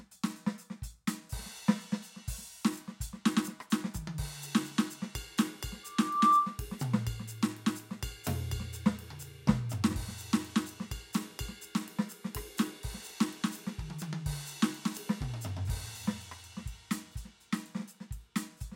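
From 5.83 to 6.64 s the music is overtaken by loudspeaker feedback squeal. A microphone is re-amplifying its own loudspeaker output, and the loop gain climbs past unity at 1.2 kHz. That pure tone swells over roughly 0.4 s to about 10 dB above the music.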